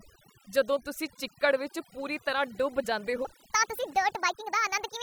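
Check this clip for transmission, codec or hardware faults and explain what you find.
Two faults are audible in this speech clip: overdone noise removal across the whole recording, and a section at the wrong speed near the end.

Overdone noise removal runs from start to finish. The noise reduction was pushed so hard that individual frequency bands are pulled down or switched off whenever their level sits close to the estimated noise floor. Softer parts of the speech fall under that threshold and vanish along with the noise. Between phrases the background drops to near silence sprinkled with twinkling, chirpy specks. On a spectrogram the gaps show as scattered isolated dots on a dark field instead of a smooth noise floor, with holes bitten out of the weaker harmonics. The waveform sits almost flat between phrases.

The section at the wrong speed begins at 3.25 s and lasts to the end of the clip. 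From there the audio plays about 1.45 times too fast, so speed and pitch rise together by roughly seven semitones. The voice turns high and hurried. The likely cause is an editor or player treating that segment as if it had a different sample clock. On a spectrogram every harmonic and formant jumps upward at 3.25 s, and the waveform's syllables become visibly compressed in time.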